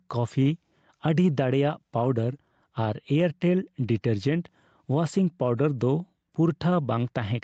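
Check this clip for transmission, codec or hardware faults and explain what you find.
There's one real problem in the speech, and it runs the whole way through: gain pumping. The level keeps swinging by roughly 5 dB. The likely cause is microphone gain set far too high, with a fast limiter or compressor clamping down on every peak and letting go in between. That leaves loud and quiet passages squeezed together, so it all sounds squashed. The top end stops around 8 kHz, which fits the call codec's bandwidth rather than any fault.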